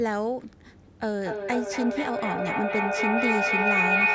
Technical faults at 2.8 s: feedback howl

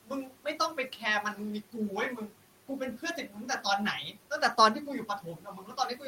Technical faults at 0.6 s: noise suppressor artifacts; speech cut by the noise suppressor

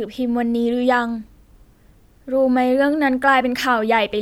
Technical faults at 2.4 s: none

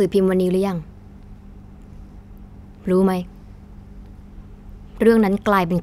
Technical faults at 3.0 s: none

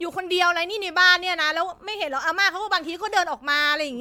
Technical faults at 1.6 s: generation loss

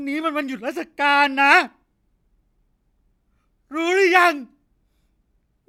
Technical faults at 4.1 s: none

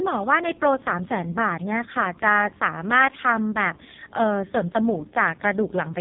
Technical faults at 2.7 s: AMR narrowband mobile codec

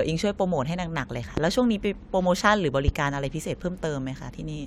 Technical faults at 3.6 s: none

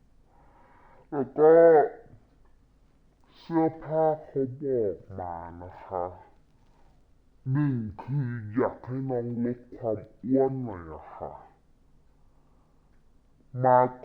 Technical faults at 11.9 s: stereo read as mono

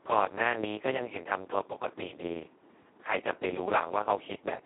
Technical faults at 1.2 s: Speex codec

